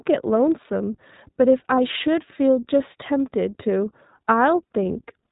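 Speech coded throughout with the iLBC codec, whose plainly audible rough, synthetic texture fits its 15.2 kbps mode; a spectrogram shows energy cut off sharply at 4 kHz. Lost iLBC frames at 1.76 to 1.79 s, fitting one dropped 20 ms frame, leave a brief buzzy held-vowel fill, seen as a short repeated-pitch-cycle patch in the waveform.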